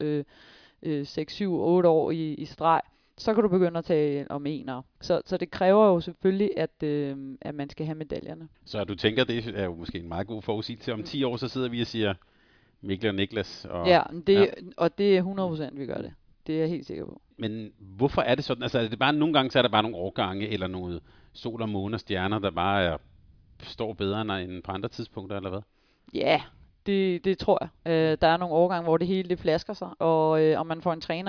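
No technical faults can be heard anywhere in the recording.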